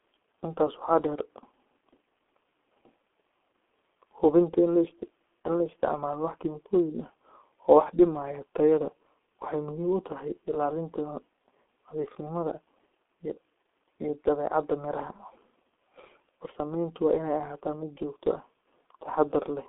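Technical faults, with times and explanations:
Throughout, G.723.1 codec: the speech sits in a 250 Hz to 3.4 kHz telephone band with nothing above 3.8 kHz, and sounds hoarse with smeared consonants. Plain band-limiting would not add that heavy roughness, which points to a 6.3 kbit/s coder that updates its voice model slowly over 30 ms frames.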